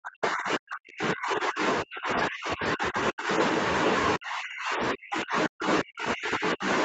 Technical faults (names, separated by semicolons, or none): speech suppressed in double talk